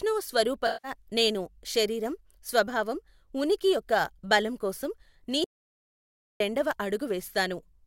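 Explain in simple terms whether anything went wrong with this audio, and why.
Two things went wrong in this speech. From 0.66 to 0.93 s there is AAC frame loss with concealment. A short stretch of the compressed audio, about 170 ms, never arrived. The player guessed at it from the sound just before, so you hear a smeared, noisy patch right before "నేను శరీరం స్వభావం ఉనికి".

Later, after "ఉనికి యొక్క బలం కోసం", there is an audio dropout to silence from 5.44 to 6.40 s. For almost a full second the sound stops completely, with no background hiss at all. The input was likely cut off, and whatever was said then is lost.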